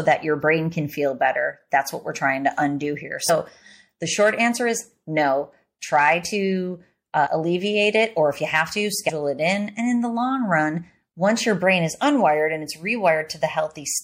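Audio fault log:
throughout MP3 compression: watery, swirly sibilants and smeared onsets, likely from encoding near 64 kbps. A spectrogram shows speckled high bands flickering between frames.
3.28, 7.25, 9.08–9.10 compressed frames skipped: the speech jumps ahead by whole 26.1 ms frames after "trying to undo here", before "alleviate it or if", and between "if you have to" and "it in". The gaps are roughly 70, 50 and 150 ms. Overlapping frames turn each join into a brief smeared blip, not a click. The waveform shows an abrupt envelope discontinuity with no silent gap.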